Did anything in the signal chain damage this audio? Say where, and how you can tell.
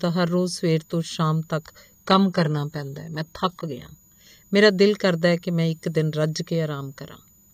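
Yes. In the analogue power stage, a switching supply whistle runs throughout: a faint high tone drifting between about 6.78 and 6.98 kHz, roughly 35 dB below the speech, from a converter switching in its audible range.

At the network stage, from 1.95 to 3.95 s, the adaptive stream drops to a lower bitrate. The quality changes abruptly, with nothing above 15 kHz and no gap. This points to a switch from a roughly 96 kbit/s AAC stream to a 20 kbit/s HE-AAC one.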